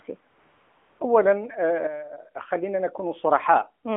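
Speech over a narrowband phone line, topping out around 3.5 kHz with only light AMR-NB coding damage, has two faults. From 0.30 to 1.00 s there's AMR comfort noise: for 700 ms the sending end treated the talker as silent and stopped sending speech frames, so the real background drops out and a smooth synthetic hiss fills the gap. From 1.87 to 2.31 s there's a sudden gain jump: speech and background together fall by about 9 dB and then snap back, likely from a digital gain change applied with no ramp.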